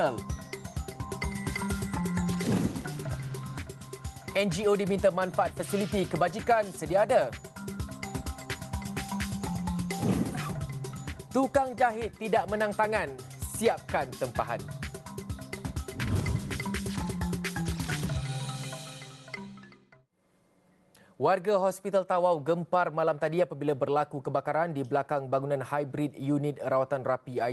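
No technical faults can be heard anywhere in this audio.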